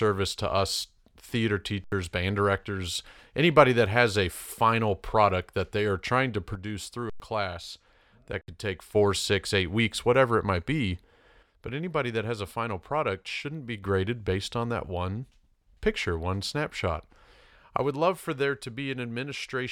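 Speech with two kinds of fault. At 1.84 s, between "to us theater" and "band directors anybody that", the sound stops dead for 80 ms; the same happens at 7.10 s for 104 ms and at 8.41 s for 67 ms. Each is an underrun with held sample: the output buffer ran dry and the converter kept its last value, flattening the waveform. When sound returns, roughly that much audio has been skipped. Separately, the level drops abruptly by about 6 dB from 6.55 to 8.95 s ("they are trying to" to "six eight weeks whatever"), from 11.43 to 13.83 s ("whatever it might be" to "based on that one"), and from 17.77 s to the end, with no other change in character. The likely cause is that one channel drops out of a stereo source carrying identical sound in both sides, halving the mono sum.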